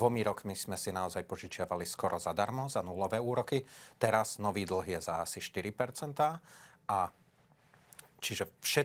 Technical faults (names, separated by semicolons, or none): none